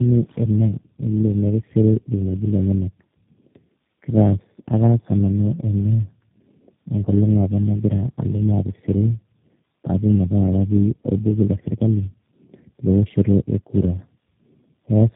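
Tandem speech coding runs through the whole of this speech clip. The sound points to a call that passed through three low-rate speech coders in a row, likely a G.729A-style 8 kbit/s link, a GSM full-rate leg, then G.729A again, with each re-encoding the last one's damage. The result is a rough, muffled, warbly voice with nothing above 3.8 kHz, more degraded than any single coder would leave it.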